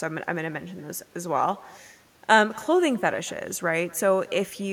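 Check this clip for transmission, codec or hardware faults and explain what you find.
One transmission fault runs through the whole speech clip: echo with no canceller. From start to finish, the far end's loudspeaker feeds into its microphone and nothing subtracts it. So each phrase returns about a fifth of a second later, about 24 dB down and thinner. A spectrogram shows faint delayed duplicates trailing every syllable, and the waveform shows small ghost bursts following each louder segment.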